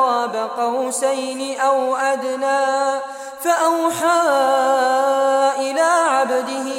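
No technical faults can be heard anywhere in this audio; the signal holds steady and intact throughout.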